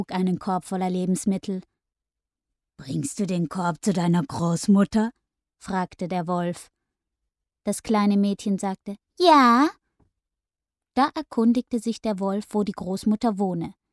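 No technical fault can be heard anywhere in this audio. Nothing in it needs pointing out or fixing.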